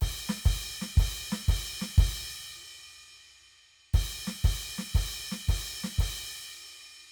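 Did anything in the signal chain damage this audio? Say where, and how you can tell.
No, nothing in the chain audibly damaged this music, and there's no stage where the signal breaks down.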